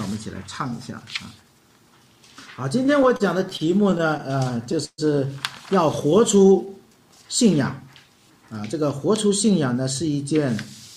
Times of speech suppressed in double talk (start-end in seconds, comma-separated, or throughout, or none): none